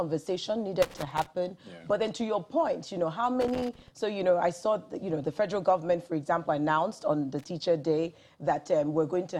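Irregular bursts of scratchy crackle chop through the audio at 0.82–1.26 s, 3.41–3.88 s and briefly at 7.39–7.44 s. This is loose connector crackle: a worn or dirty contact shifting in its socket, repeatedly making and breaking the signal path.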